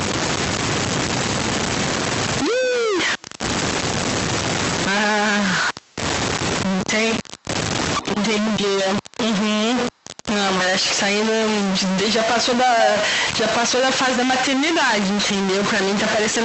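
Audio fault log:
Throughout, stuck bit: distortion on the speech and noise in pauses, likely one converter bit held fixed, throwing about half the samples off by its weight.
2.5–2.72 s, 3.18–3.22 s, 5.74–5.95 s, 7.99–8.17 s, 9.92–10.16 s, echo leak: repeats about 15 to 40 dB below the speech, trailing by 228 ms, later 201 ms, likely loudspeaker sound the echo canceller missed.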